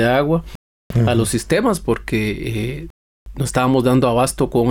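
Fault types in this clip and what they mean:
Rebuffering stall: The player ran short of downloaded audio and paused until more arrived. The sound drops to silence from 0.55 to 0.90 s and again from 2.90 to 3.26 s. Each time it picks up exactly where it stopped. Nothing is skipped. Each gap adds roughly 0.35 s.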